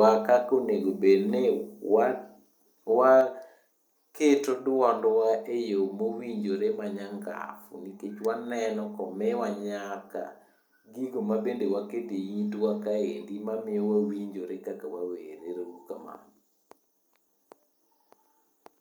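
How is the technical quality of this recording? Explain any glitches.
There is one glitch. At 3.21 s the whole recording drops about 4 dB in a single step. This is likely a microphone volume stepped down by software that judged the input too loud.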